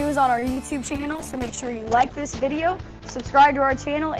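At 0.39 to 0.44 s the sound is held for 25 ms too long before carrying on, with nothing lost. This is a short stall from a late packet: the jitter buffer ran dry, so the receiver stretched the last sound until the packet arrived, adding 25 ms of delay.

Between 0.54 and 0.68 s there is a brief smear where 20 ms of audio is gone, replaced by 22 ms of continued sound that blends back into the real signal, adding a little extra delay. This is short concealed packet loss: the decoder never received that stretch and synthesised a substitute from the preceding sound.

From 0.83 s to the end the audio turns coarser and duller, losing everything above 8 kHz where it previously reached 20 kHz. This is a call bitrate drop: the bandwidth estimate fell, and the encoder went from 48 to 8 kbps, staying at its lowest rate for 1.34 s, and the clip ends before the bitrate recovers.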